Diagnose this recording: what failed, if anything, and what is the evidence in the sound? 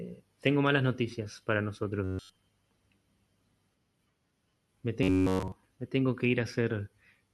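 Robotic sound from repeated short buffers, at the driver or buffer stage. From 2.04 to 2.35 s, and again from 5.03 to 5.52 s, the speech turns into a rigid, metallic buzz at 93.8 Hz. In both spans the real audio is gone, replaced entirely by repeats. The likely cause is new audio arriving too seldom, so the software loops its last block. A 93.8 Hz buzz fits a block of about 10.7 ms played over and over.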